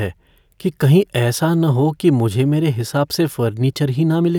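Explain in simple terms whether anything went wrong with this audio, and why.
Nothing seems to have gone wrong here, since the speech comes through steady and unbroken without anything odd catching the ear at any point.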